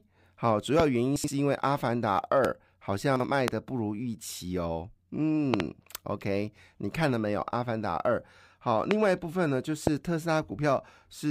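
A sharp pop stands out from the speech at 0.80 to 0.82 s, roughly 20 dB above it, while the speech carries on underneath. Four more single pops follow at 2.45 to 2.47, 3.48 to 3.50, 8.91 to 8.93 and 9.87 to 9.89 s, and a double pop comes at 5.54 to 5.62 s. All are loud pops, likely sudden voltage steps from a plug, switch, static discharge or driver glitch, shaped by the circuitry after them.

Between 1.16 and 1.28 s the speech briefly jumbles. This is chunks out of order: a 40 ms chunk played two chunks late, after the ones meant to follow it, leaving hard joins. The same happens at 3.16 to 3.24 s, where a chunk arrived one chunk late.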